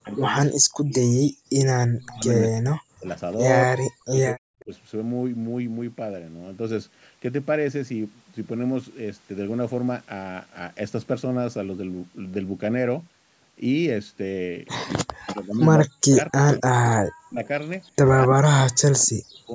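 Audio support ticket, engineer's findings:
Speech suppressed in double talk, 0.0–4.72 s and 14.96–19.54 s. Likely cause: the echo canceller could not separate the local talker from loudspeaker echo while both sides spoke, so it turned both down. Speech dips by up to about 40 dB, with roughly 3 s lost in each window.

Echo leak on the loudspeaker side. Likely cause: residual echo the canceller failed to remove was sent back. A delayed copy of the speech is heard at these points:

0.08–0.93 s, 238 ms delay, about -30 dB
2.0–2.15 s, 241 ms, about -25 dB
4.59–4.63 s, 245 ms, about -35 dB
15.27–16.16 s, 267 ms, about -15 dB, the most audible
17.46–17.91 s, 270 ms, about -35 dB

Across the clip the delay creeps from 238 to 270 ms.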